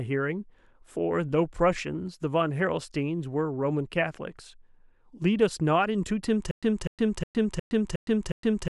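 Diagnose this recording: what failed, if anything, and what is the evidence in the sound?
From 6.51 s to the end, the speech breaks into a stutter with silent gaps: the same 0.25 s fragment repeats six times, each followed by about 0.11 s of dead silence, every 0.36 s. This is likely a stalled playback or stream buffer replaying its last chunk, with the audio that should have followed lost.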